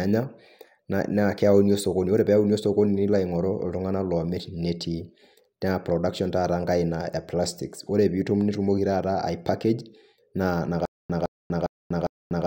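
From 10.85 s to the end, the speech breaks into a stutter with silent gaps. A fragment of about 160 ms repeats four times, each followed by about 240 ms of digital silence, every 0.40 s. The stream likely stalled and replayed its last fragment. The missing audio is lost.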